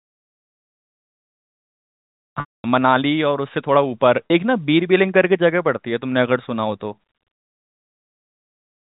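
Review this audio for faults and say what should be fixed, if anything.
From 2.40 to 2.64 s a buzzy, held tone fades to silence, then the speech resumes with a brief cross-fade; at 4.27 to 4.30 s a 40 ms gap leaves only a short held buzz. This is packet loss with pitch repetition: the receiver looped the last pitch period to cover missing packets, and the 240 ms gap fits about twelve 20 ms packets. Forward error correction or redundant packets on the network path would prevent it.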